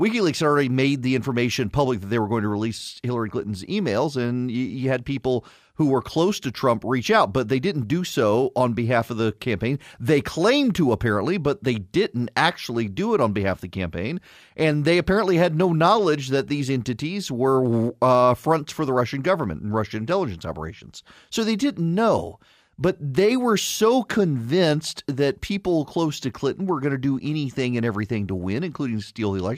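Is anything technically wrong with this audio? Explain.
No, nothing in this speech recording stood out as a technical problem on listening.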